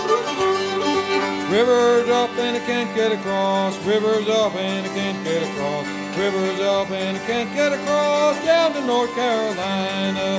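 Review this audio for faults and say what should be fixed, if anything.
No faults; nothing needs fixing.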